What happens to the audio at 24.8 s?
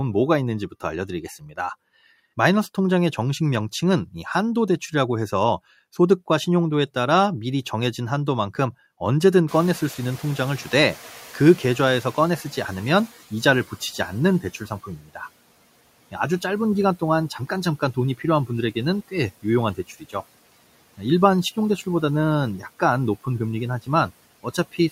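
Right at the tail, from 24.43 s to 24.92 s, that's speech cut by the noise suppressor. It mistook bits of the closing speech for background and pulled them down by up to about 14 dB, so roughly a tenth of a second sounds swallowed and faint.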